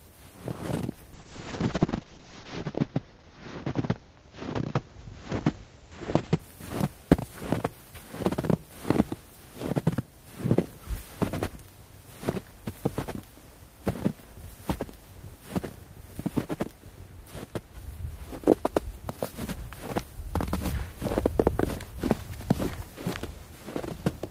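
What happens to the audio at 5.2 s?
At 5.2 s the sound is inside a call bitrate drop running from 1.14 to 6.45 s. The encoder, starved of bits, codes coarsely and cuts off the top end at 8 kHz, leaving a muffled, watery texture that fits a fall from about 32 kbps to around 7 kbps. On a spectrogram, everything above 8 kHz goes blank and detail smears into blocky patches.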